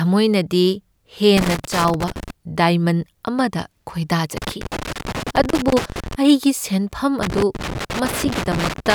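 Loose connector crackle breaks into the speech at 1.37–2.30 s, again at 4.37–6.15 s just before "ꯑꯩꯒꯤ ꯁꯦꯟꯐꯝ", and from 7.23 s to the end after "ꯑꯩꯒꯤ ꯁꯦꯟꯐꯝ". A failing contact chops the signal on and off, producing irregular scratchy bursts. These appear as jagged dropouts and spikes in the waveform and scattered broadband vertical streaks on a spectrogram.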